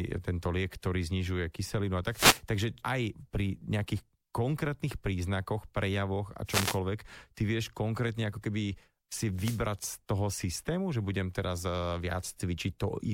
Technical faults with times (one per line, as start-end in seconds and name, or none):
2.10-2.42 wireless microphone noise hit
6.45-6.79 wireless microphone noise hit
9.35-9.65 wireless microphone noise hit